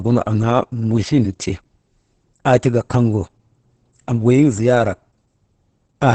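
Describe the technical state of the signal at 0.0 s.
Opus voice compression is present at 0.0 s and runs through the whole clip. The SILK linear-prediction coder, at what sounds like roughly 10 kbps, caps the band near 8.9 kHz and codes the excitation coarsely, so the speech comes out heavily muffled, hoarse and slightly robotic.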